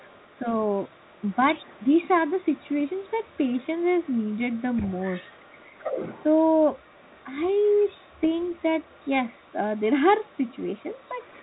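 Other side's voice leaking through: a second, quieter voice sits under the speech at 0.00–2.07, 2.42–3.67, 4.01–6.25, 6.74–9.81 and 10.25–11.42 s. It is faintest around 2.42–3.67 s and most audible at 4.01–6.25 s, about 15 dB below the talker. The likely cause is loudspeaker playback that the echo canceller did not fully remove.

Bit errors on an ADPCM link: at 8.24–8.28 s, flipped bits upset the decoder's step size and predictor, producing a short, rough pop with a brief change in level.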